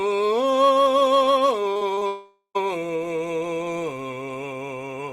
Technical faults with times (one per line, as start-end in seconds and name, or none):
1.73-2.03 repeated packet loss (robotic sound)
2.07-2.57 long network dropout